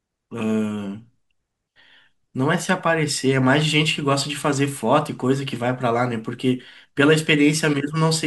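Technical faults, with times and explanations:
Nothing stood out on listening to this speech recording.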